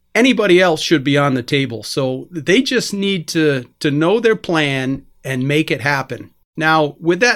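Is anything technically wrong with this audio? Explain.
No, there's nothing technically wrong that I can hear in this speech recording.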